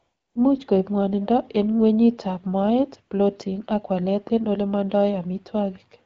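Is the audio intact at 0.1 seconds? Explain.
No. At 0.1 s the clip is inside a stretch of AMR comfort noise lasting from 0.0 to 0.35 s. The phone treated the opening as silence and sent no speech frames, so the receiving end filled the gap with synthetic noise built from a rough level and spectral shape. It sounds like a smooth, steady hiss instead of the real background. A spectrogram shows a flat, even noise band with no fine detail, and the waveform a uniform low-level envelope.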